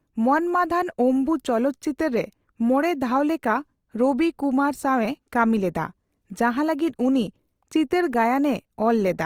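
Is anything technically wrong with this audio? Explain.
Yes, there's some fairly obvious codec damage running through the whole speech clip, and it sounds like Opus compression, most likely in its music (CELT) mode at a low rate, roughly what you'd expect around 24 kbps. The codec keeps each band's overall energy but, short of bits, refills detail with folded or noisy content, so the speech comes out grainy and rough instead of swirly. The bandwidth stays full, reaching about 20.2 kHz.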